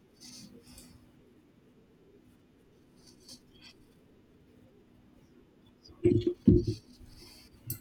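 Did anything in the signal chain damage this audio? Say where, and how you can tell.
Yes: overlapping chunks in buffering replay 50 ms at 2.04, 4.59 and 7.14 s, every 2.5 s. The sound doubles rather than gapping, which rules out dropouts.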